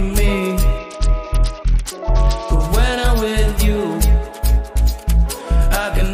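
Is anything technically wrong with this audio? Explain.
Yes. From 0.78 to 2.49 s the treble dulls and a gritty noise rises, then clears. This is a Bluetooth SBC bit pool drop: the link cut the encoder's bit budget, consistent with bit pool 28 falling to 8. That starved the top sub-bands and coarsened the rest.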